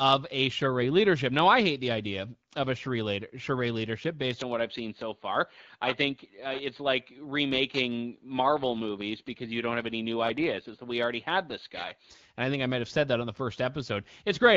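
From 4.39 s to 12.11 s the speech turns dull and boxy. Everything above 4.6 kHz disappears the instant the change happens, right where "and I think I" begins. There is no gap and no jump in loudness, only a faint new background noise about 50 dB below the speech. Then the brightness returns at 12.11 s. The likely cause is the input switching to a poorer device, a microphone or headset profile that passes a narrower band than the original one.

Inside that span, from 8.42 s to 10.86 s, the speech grows rougher and more synthetic, while the bandwidth stays the same and nothing drops out. This is an AMR rate drop. The AMR-WB link, which at 12.65 kbit/s leaves only light codec colouring, steps down to 8.85 kbit/s. It gives up bits for detail in exchange for error protection and climbs back to the higher rate at 10.86 s.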